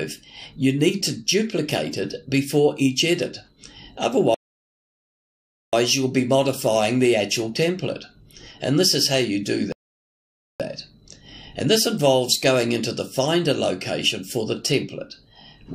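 At 4.34 s the sound stops dead and goes silent until 5.73 s. This is a rebuffering stall. The player used up its downloaded audio and waited for more. Playback then picks up at exactly the point where it broke off. Nothing is skipped, but about 1.39 s of dead air is added. A second, shorter stall follows at 9.72 s, lasting until 10.60 s. That one adds about 0.87 s of silence.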